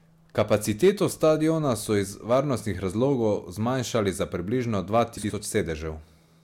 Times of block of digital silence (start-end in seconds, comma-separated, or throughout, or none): none